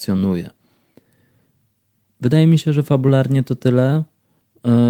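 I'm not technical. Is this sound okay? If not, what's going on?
Yes, this speech recording sounds fine. Nothing in it stands out as a technical problem.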